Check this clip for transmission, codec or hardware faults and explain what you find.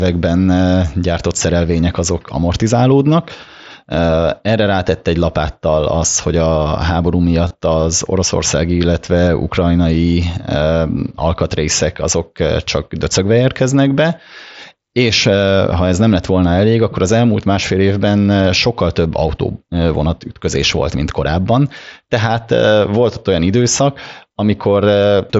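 One transmission fault is audible, concealed Bluetooth headset packet loss, carried over the wideband mSBC headset link, whose 8 kHz bandwidth and light graininess on loud sounds are audible.

From 7.46 to 7.54 s, just before "az oroszországi illetve", packets between headset and phone went missing: 45 ms of audio across a 75 ms stretch, consistent with about six lost frames, the longest gap 22.5 ms. The receiver patched each gap by repeating the best-matching recent waveform segment, so the dropouts come through as a brief buzzy tone with a small warble where genuine audio resumes.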